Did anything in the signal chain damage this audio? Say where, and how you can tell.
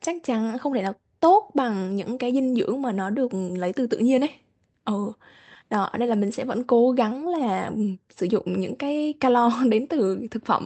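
No, nothing in the signal chain stood out as damaging this speech on listening.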